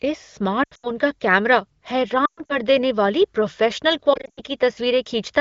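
Lost AMR speech frames break up this wideband speech at 0.63 to 0.91 s (just before "का कैमरा"), 2.25 to 2.57 s and 4.13 to 4.41 s. Corrupted frames failed their check, so the decoder reused the last pitch and vocal tract settings at falling gain, producing warbling dips and brief fades, the longest about 120 ms near 2.3 s.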